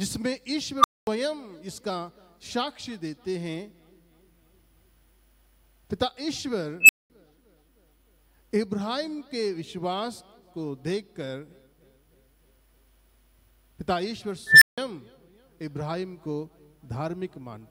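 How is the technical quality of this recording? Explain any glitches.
The recording is marred by three unstable filter bursts. A recursive filter with bad coefficients feeds back on itself, so a tone balloons, clips and overflows, then the output drops out until the filter resets. Unlike acoustic feedback howl, each burst swells within milliseconds and ends in dead silence:

0.80–1.07 s: around 1 kHz, 43 ms build, about 230 ms silence.
6.80–7.10 s: around 3 kHz, 86 ms build, about 210 ms silence.
14.47–14.78 s: around 2 kHz, 148 ms build, about 160 ms silence.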